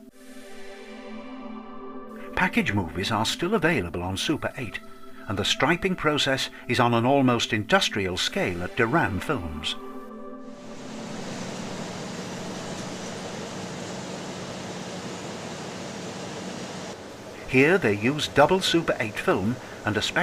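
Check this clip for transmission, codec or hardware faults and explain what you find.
One transmission fault turns up. A call bitrate drop runs from 1.17 to 6.73 s. The estimated bandwidth fell, so the encoder coded far more coarsely, which fits a drop from about 128 to 28 kbps. For roughly 3.5 s the sound turns rough and muffled, its high end cut away, before clarity returns.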